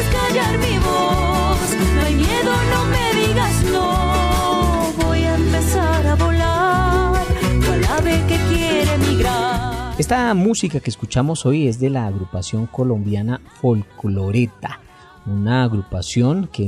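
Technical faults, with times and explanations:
No technical faults are audible anywhere in the recording.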